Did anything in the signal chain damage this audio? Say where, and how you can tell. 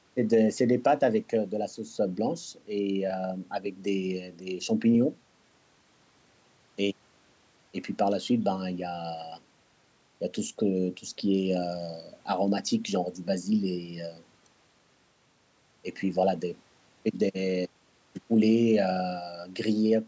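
No, nothing in the signal chain stood out as damaging this speech on listening.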